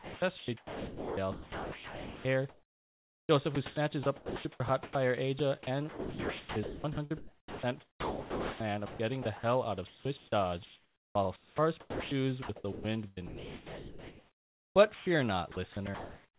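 From 0.0 to 16.4 s the speech is choppy, with about 10 s of it replaced by smooth comfort noise; the likely cause is sound chopped by the voice detector, gating repeatedly. On a spectrogram, speech blocks alternate with flat hiss bands, all capped near 4 kHz.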